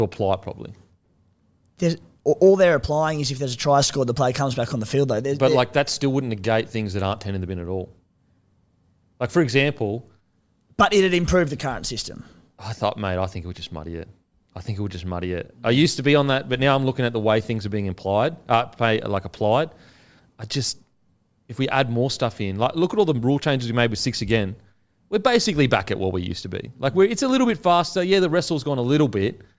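Nothing in this recording trips a technical fault at any point, so there's nothing to flag here.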